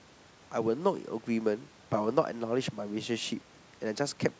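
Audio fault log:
No fault is logged for this speech audio.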